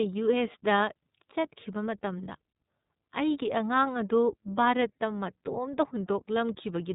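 Throughout, the speech passed through the iLBC codec, coding each frame independently, which fits the 30 ms mode, so nothing above 3.8 kHz survives and the speech sounds plainly rough and synthetic.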